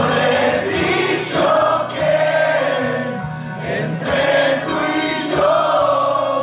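Nothing goes wrong here; the sound has come through a phone-style call codec that leaves nothing above 4 kHz, consistent with G.711 at 64 kbps, and that band limit is simply how such a call line sounds.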